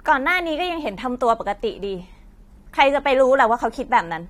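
At 0.81 s the speech drops abruptly to an adaptive stream at a lower bitrate, with no gap, to the end. Treble vanishes above 16.4 kHz. Artefacts rise, which points to about half the original bitrate.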